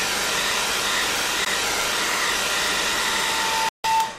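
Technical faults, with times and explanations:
1.45–1.47 s and 3.69–3.86 s, Bluetooth dropout: the audio cuts out abruptly for about 14 ms, then 154 ms, likely lost wireless packets. It shows as flat waveform gaps and blank spectrogram columns.
2.85 s to the end, loudspeaker feedback squeal: a pure 893 Hz tone builds up over about a second to around 5 dB above the sound as the mic-to-speaker loop runs away. It shows as one bright horizontal spectrogram line.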